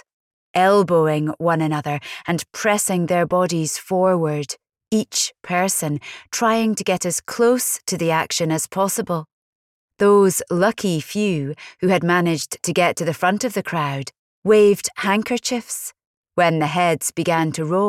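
No technical faults are audible.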